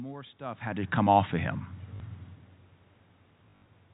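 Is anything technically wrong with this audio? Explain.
Yes, there are two kinds of fault.

Automatic gain rising runs from 0.38 to 1.61 s. The gain control judged the input too quiet and pushed its gain up by about 5 dB. It did this slowly, over more than a second. The voice and the room noise swell together. That shared rise is the clue. A talker shifting position, as happens near half a second, would change the voice but not the background.

Packet loss with last packet repeated happens twice. The first is at 1.96 to 2.00 s, with 40 ms missing, which fits two 20 ms packets. The second is at 3.50 to 3.66 s, where 120 ms goes missing in patches over 160 ms. Its longest gap is 60 ms. Each time, the receiver replayed the last good audio. The replayed audio seldom lines up with the pitch. The runs give a brief robotic stutter with a buzz that points to 50 Hz.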